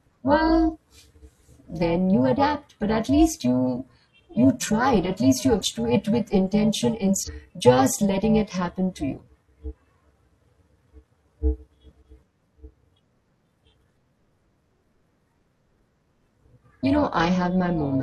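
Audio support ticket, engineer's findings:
Overlap-add ripple, whole clip. Metallic buzz with extra tones around the speech, level swinging about 11 dB at around 400 Hz. Probable component: frame-based processing stage (STFT/resynthesis). Window and hop overlap don't sum to constant gain, so level pulses once per frame. Unlike amplitude modulation from a gain control, the rate is locked to the frame period and stays constant.

Compressed frames skipped, at 5.57–5.62 s, 7.23–7.29 s and 9.66–9.71 s. Short jumps where the speech skips ahead, around 300 ms lost at the first, around 400 ms at the other two. That matches whole 42.7 ms codec frames, several per event. Probable component: decoder input or file integrity. Damaged or missing frames are dropped, not concealed. Unlike a sample-level dropout or edit, the jump is a multiple of the frame length rather than silence.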